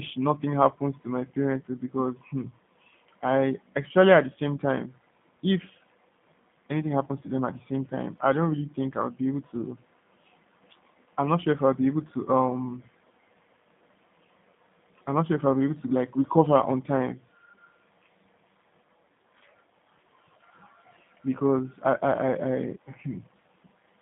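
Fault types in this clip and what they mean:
G.729 codec: a low-rate speech coder that discards the waveform and resynthesises each 10 ms frame from a vocal tract filter, a pitch predictor and a sparse pulse excitation, at a rate consistent with 8 kbit/s. Throughout this speech clip the damage is plainly audible: the band is confined to roughly 150 Hz to 3.6 kHz, so nothing above that reaches the ear, and the resynthesis leaves the voice sounding rough and slightly synthetic, as expected of the G.729A variant.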